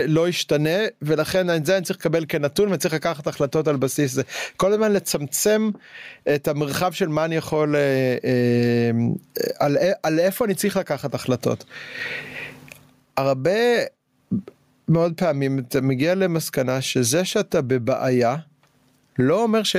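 Throughout the speech, the sound is squashed, with the gain swinging around 20 dB: gain pumping, likely from excessive input gain driving a fast limiter.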